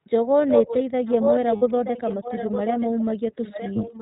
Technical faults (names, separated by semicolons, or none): iLBC codec; echo leak; lost iLBC frames; speech suppressed in double talk